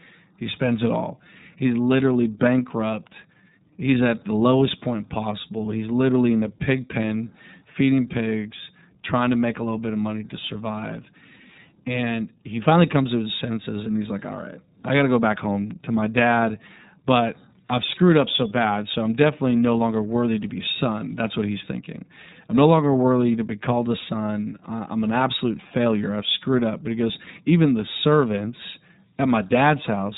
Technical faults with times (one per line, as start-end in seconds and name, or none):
0.00-30.17 iLBC codec